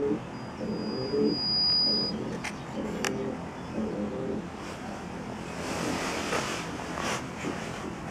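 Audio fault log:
throughout, channel delay (comb filtering): one channel trails the other by roughly 20 ms, and folding them to mono cancels whatever they share at evenly spaced frequencies. The first notch sits down near 20 Hz, with further notches repeating about every 50 Hz, which gives the rough, slightly doubled sound heard across the whole clip. On a spectrogram this appears as fixed horizontal dark stripes, and the waveform shows reduced, uneven amplitude where the two channels partly cancel.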